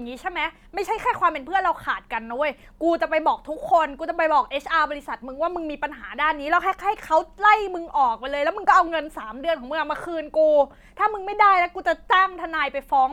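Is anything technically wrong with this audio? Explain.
No, nothing technically wrong can be heard in this speech recording. There is no fault to point to at any moment in the clip.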